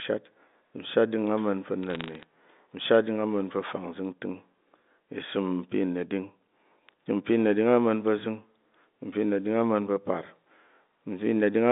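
From 1.83 to 2.24 s the speech picks up a burst of sharp, isolated ticks that add up to a brief crackle. These are bit errors on a digital phone line: roughly a fraction of a percent of bits in the G.711 stream were flipped, and each flip corrupts a single sample, with hits on the sign or upper bits jumping hardest. Unlike packet loss, nothing drops out or stutters. The narrowband speech runs on intact beneath the clicks.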